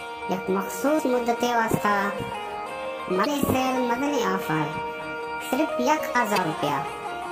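Damaged data in the compressed stream hits three times, at 0.96 to 1.00 s, 3.23 to 3.27 s and 6.34 to 6.38 s. At each point some of the encoded bytes are wrong, so the decoder misreads those frames, loses its place and has to search for the next valid frame header before it can resume. Each event is a brief chirp, squawk, click or short hole of roughly 40 ms that cuts across the sound.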